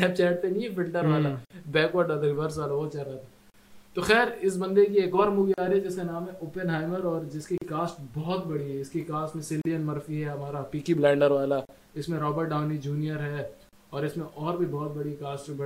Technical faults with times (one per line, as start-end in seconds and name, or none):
1.45-1.50 gap at a join of encoded pieces
3.50-3.54 gap at a join of encoded pieces
5.54-5.58 gap at a join of encoded pieces
7.58-7.62 gap at a join of encoded pieces
9.62-9.65 gap at a join of encoded pieces
11.65-11.69 gap at a join of encoded pieces
13.69-13.73 gap at a join of encoded pieces